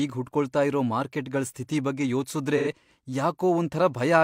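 From 2.57 to 2.67 s, AAC frame loss with concealment smears 85 ms, fitting two lost frames, patched from earlier spectrum rather than left silent.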